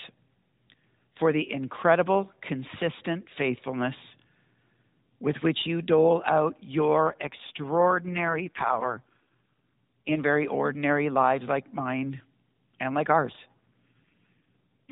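AMR rate drop, from 7.04 to 10.19 s, after "which you dole out" and ending before "very ordinary lives like", and again from 13.26 s to the end at 14.92 s, after "and like". In both stretches the narrowband mobile speech turns buzzy and synthetic with no gap and no change in bandwidth. This sound fits the codec stepping down from its 12.2 kbps mode to the 4.75 kbps mode, leaving far fewer bits to describe each frame.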